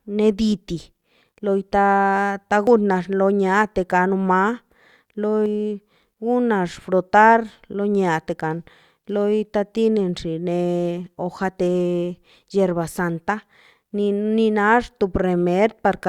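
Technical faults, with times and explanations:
2.67 s and 5.46 s, compressed frames skipped: damaged or missing frames, about one then two of roughly 93 ms each, are dropped, so speech jumps ahead about 100 ms, then 200 ms.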